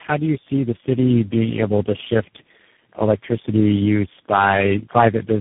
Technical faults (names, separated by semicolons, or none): tandem speech coding